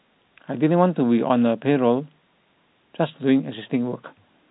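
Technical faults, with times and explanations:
No technical faults can be heard in this speech. It comes through G.711 telephone coding, so nothing above about 3.9 kHz is present, and any quantisation noise from that coding is faint at most.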